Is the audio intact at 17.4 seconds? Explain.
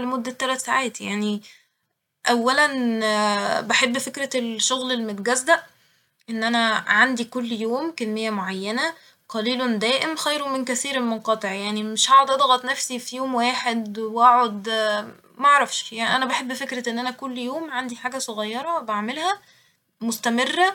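Yes, at 17.4 seconds the audio is intact, with no dropout, glitch or other fault at that moment.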